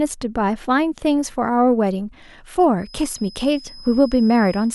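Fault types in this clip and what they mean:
Feedback whistle: From 2.75 s right through to the end of this speech clip there's a thin, steady tone sitting at about 5.1 kHz, well down under the talking at roughly 25 dB below it, and it wobbles a little in level as it goes. The likely cause is a speaker-to-mic loop hovering just at the edge of feedback, so that one frequency keeps ringing on its own without ever building up into a full howl.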